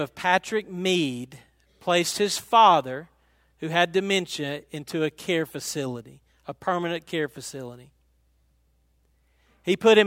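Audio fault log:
Nothing in the signal departs from normal technical behaviour at any point in the recording.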